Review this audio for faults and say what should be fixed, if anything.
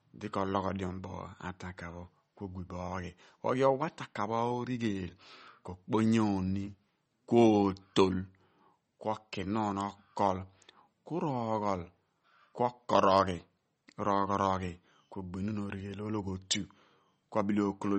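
MP3 compression throughout: speech sounds watery, with nothing above 8.4 kHz, likely from a starved encoder, which fits about 32 kbps. Encode at a higher bitrate or keep a lossless master.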